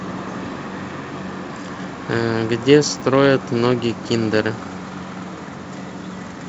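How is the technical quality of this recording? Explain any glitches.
There's one glitch worth flagging, on top of the G.722 telephone coding at 48 kbit/s, which puts a faint hiss up top. Around 2.97 to 3.01 s there's a chunks-out-of-order slip: a 10 ms chunk lands three chunks late, so the speech briefly jumbles across three hard joins.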